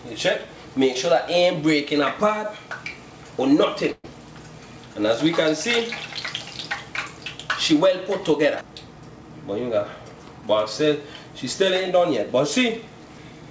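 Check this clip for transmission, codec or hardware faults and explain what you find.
There's one transmission fault: a burst of packet loss from 3.92 to 4.06 s. A run of packets never arrived in time, so the receiver stretched the last sound out for about 117 ms, letting it fade, with about 20 ms of near-silence. Then playback jumps ahead, and roughly 120 ms of the original is gone. The band stops at 8 kHz, which fits a wideband call codec like G.722.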